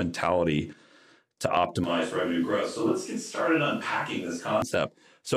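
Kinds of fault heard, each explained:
Switch to a distant microphone: From 1.84 s to 4.62 s the speech abruptly turns roomy and hollow, with thinner bass and background noise sitting roughly 30 dB below the voice, then snaps back just as suddenly. Overall loudness stays about the same. The likely cause is that the close microphone's signal dropped out for that stretch and a microphone further away, such as a camera's, filled in, picking up more room than voice.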